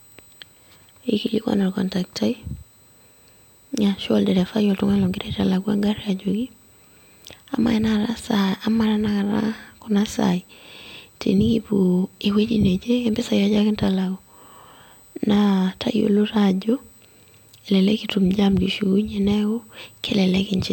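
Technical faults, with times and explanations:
Throughout, USB whine: a thin, steady, fixed-pitch tone sits under the speech at 8 kHz, with its strongest component at 16 kHz, roughly 35 dB below the speech. Current drawn in 125-microsecond USB microframes leaks into the audio through power or ground, so the whine follows the bus clock rather than the sound. On a spectrogram it appears as sharp horizontal lines at 8 kHz and 16 kHz across the whole clip, unaffected by pauses.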